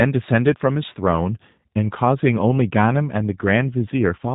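From start to finish the speech sounds slightly rough and synthetic, with a thin, buzzy edge and no brightness above about 4 kHz, a flat band-limited quality typical of narrowband VoIP. This is G.729 codec damage, plainly audible here. The codec discards the actual waveform and rebuilds each 10 ms frame from a vocal tract filter, a pitch predictor and a few pulses. That coarse reconstruction, which fits the 8 kbit/s G.729A variant, produces the grainy texture.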